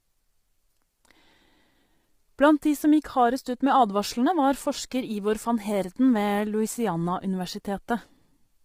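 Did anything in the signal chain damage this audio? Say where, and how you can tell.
Yes, at the codec stage, likely low-delay AAC compression (AAC-ELD) at a rate that fits about 24 kbps. The speech is rough and grainy throughout, and a spectrogram shows blurred harmonic lines, noise filling the gaps between them, and a thin, smeared top band, because too few bits are left to code the fine spectral detail.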